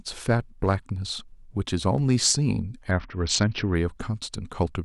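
From 2.91 to 3.75 s the speech goes through a Bluetooth SBC bit pool drop. The link gets congested and the encoder starves itself of bits, which fits a fall to a bit pool around 7, roughly 61 kbps. So the treble dulls and a gritty noise creeps in.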